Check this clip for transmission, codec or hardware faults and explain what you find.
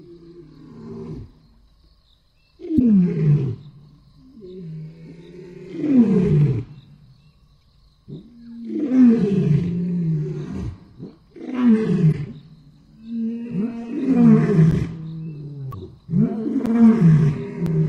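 Two kinds of fault are present: corrupted compressed data in four places and a run of regular driver dropouts near the end.

Damaged data in a compressed stream occurs at 2.76–2.80 s, 7.59–7.62 s, 12.08–12.14 s and 15.69–15.74 s. The decoder misreads bad frames and resynchronises, producing a brief chirp, click or short hole.

Periodic USB or driver dropouts run from 14.71 to 17.67 s, once per second, about four times. The bus or driver stalls, and roughly 10 ms of audio is replaced by silence, heard as evenly spaced ticks.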